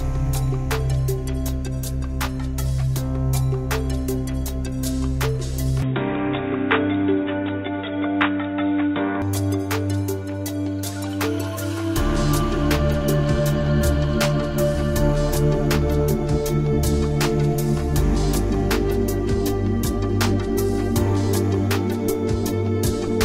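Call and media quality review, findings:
Input switched to a poorer device, 5.82–9.22 s: sound turns dull and boxy, then clears. Spectrogram shows content cut off above 3.8 kHz for that span; waveform level unchanged, no gap at switch. Faint new noise floor. Likely headset/alternate mic input.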